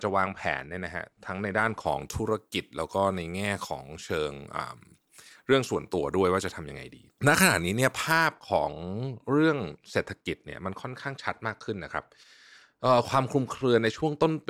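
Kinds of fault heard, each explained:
Pre-emphasis left on: a 50 µs treble boost went uncorrected. The speech sounds thin and sibilant, about 11 dB too bright at 10 kHz.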